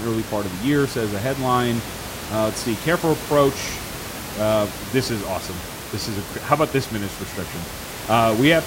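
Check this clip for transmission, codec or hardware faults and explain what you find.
No transmission, codec or hardware faults are present in this speech clip; the only background sound is the room noise captured by the microphone, sitting about 11 dB below the speech as part of the recording itself.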